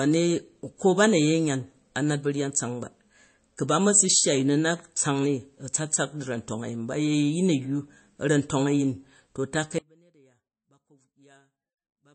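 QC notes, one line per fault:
Throughout: MP3 compression. Watery, swirly speech with smeared attacks and nothing above 8.4 kHz, likely from low-bitrate encoding, which fits about 32 kbps.
9.79 s to end: audio dropout to a faint residue. After "a̱yyu a̱ra̱ntong a̱yin to" speech cuts out abruptly, leaving faint sound about 30 dB down, likely a lost signal on a live path.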